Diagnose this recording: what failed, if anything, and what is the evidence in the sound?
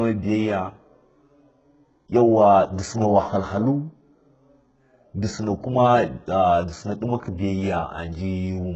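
The fault sits at the codec stage and runs through the whole speech clip, with heavy coding damage and no content above 8 kHz. The likely cause is HE-AAC compression, pointing to a very low bitrate of about 8 kbps, where treble is copied up from lower bands rather than coded. A simple low-pass filter would leave dull treble, not treble rebuilt from lower bands.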